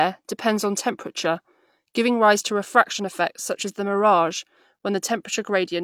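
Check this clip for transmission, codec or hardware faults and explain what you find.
Nothing stood out on listening to this speech recording.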